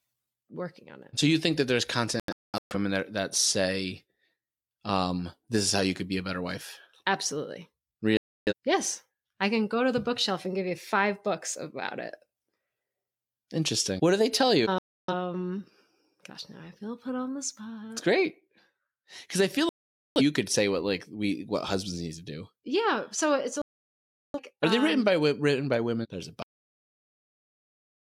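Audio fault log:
2.20 to 24.40 s, digital broadcast dropout: five mutes at 2.20 to 2.75 s after "you think that there's" (scattered holes, longest about 0.21 s), 8.17 to 8.53 s, 14.78 to 15.14 s after "do they tell you", 19.69 to 20.21 s, and 23.62 to 24.40 s after "so it's a". Each time the receiver lost good frames and muted until clean ones returned, so the speech vanishes and resumes with that stretch gone.
26.43 s, cut-off end: the speech stops abruptly mid-sound and drops straight to digital silence with no natural decay, because the final buffers were never written or played out, leaving silence to the end.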